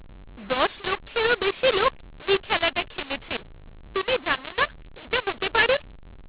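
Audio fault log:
Throughout, mu-law and A-law mixed up: speech coded with A-law is decoded as mu-law, so levels are remapped unevenly, some swollen and others shrunk. Unlike clipping, the harshness persists in quiet passages, and pauses fill with noise instead of falling silent.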